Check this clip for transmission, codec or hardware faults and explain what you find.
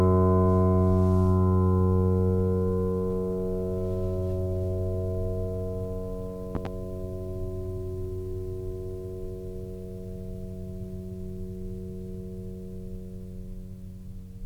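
One hardware fault is present in the music. From 6.55 to 6.68 s there is a loud pop, two sharp thumps well above the music, which plays on beneath. A sudden voltage spike, likely from a plug or switch, caused it.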